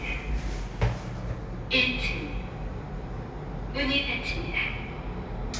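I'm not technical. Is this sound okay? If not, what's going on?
Yes, this sound is okay, and nothing is going wrong in it.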